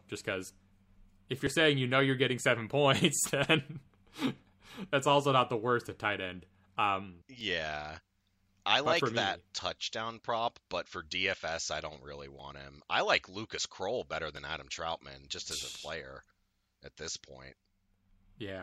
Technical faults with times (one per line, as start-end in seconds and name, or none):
1.47 overlap between stream segments
7.41 overlap between stream segments
12.39-12.42 overlap between stream segments
14.37-14.39 overlap between stream segments